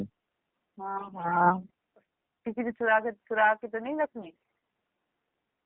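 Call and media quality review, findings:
AMR narrowband mobile codec, whole clip: speech band-limited to roughly 150 Hz–3.4 kHz, buzzy and synthetic. The low-mode texture fits AMR-NB at around 7.4 kbps. Plain telephone filtering would sound dull but clean, without this vocoder buzz.

AMR bit errors, 0.96–1.71 s and 4.22–4.57 s: hoarse, scratchy, gargly voice that keeps its pitch and level. The unprotected bits are corrupted, so excitation pulses and fine gain and spectrum values are misplaced. Packet loss would instead leave gaps or smeared concealment. The first burst is heavier.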